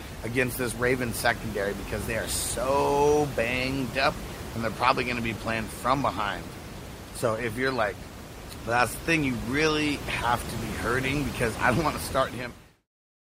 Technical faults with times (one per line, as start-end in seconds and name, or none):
none